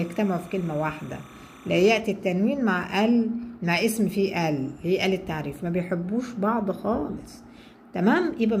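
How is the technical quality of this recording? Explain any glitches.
The recording has one fault. Timecode bleed runs from 0.0 to 2.0 s. Linear timecode leaks in from a nearby line, a square wave flipping between roughly 1 and 2 kHz, heard as a faint chirping warble well below the main sound.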